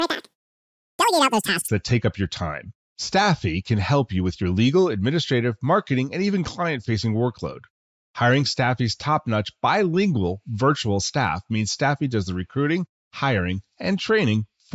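From 0 to 1.68 s, just before "that take up your", the speech has a wrong sample rate. Audio recorded at 16 kHz is played at 32 kHz, so it runs at double speed and an octave high. It sounds chipmunk-like and rushed. On a spectrogram, formants and harmonics sit at twice their normal frequencies, compressed in time.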